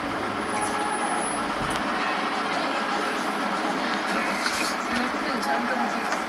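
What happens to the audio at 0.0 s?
Nothing goes wrong at 0.0 s; the sound starts cleanly, with no dropout, click or distortion at that moment.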